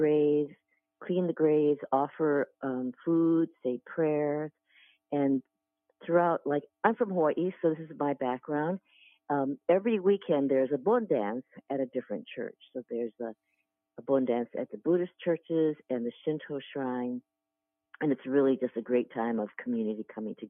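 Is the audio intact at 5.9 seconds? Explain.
Yes, at 5.9 seconds the audio is intact, with no dropout, click, distortion or other fault at that point.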